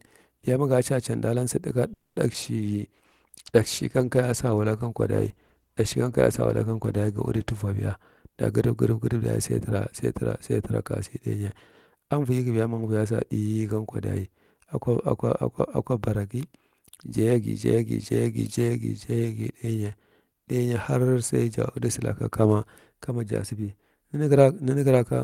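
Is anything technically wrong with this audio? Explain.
Yes, several call-transport faults affect this speech clip.

From 1.93 to 2.18 s, just after "can danlan sa taka", there is what is likely a call audio freeze. Delayed packets left the jitter buffer empty, and about 230 ms of extended, fading sound fills the gap. On a spectrogram it shows as a smeared, decaying band, and the speech then resumes late with nothing lost.

At 2.32 and 2.42 s, still after "can danlan sa taka", two short concealed packet losses occur, each 20 ms. The decoder bridged each missing stretch with synthesized continuation, which gives brief smears or wobbles. These show as small blurred slices in the waveform.

From 2.57 to 7.72 s, a call bitrate drop from 32 to 15 kbps makes the encoder quantize more coarsely. The speech turns rough and muffled, and the spectrogram shows the high-frequency content thinning out.

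From 7.52 to 9.22 s (about 7% fast) and from 12.10 to 12.90 s (about 11% fast), jitter buffer speed-up trims pitch-period chunks, roughly a tenth of a second in total each time. The speech sounds hurried at the same pitch, and the waveform shows whole cycles removed.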